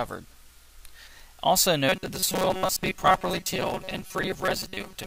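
From 1.89 s to the end at 5.06 s, the audio takes on robotic sound from repeated short buffers, a rigid 188 Hz buzz, likely from roughly half the signal being replaced by a looped 5.3 ms buffer, visible as evenly spaced vertical striations.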